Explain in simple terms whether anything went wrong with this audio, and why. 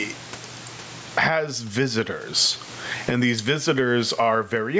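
Gain pumping runs through the whole clip. Loud and soft parts end up closer in level, and the sound is squashed. Likely cause: gain set far too high, with a limiter pulling it back.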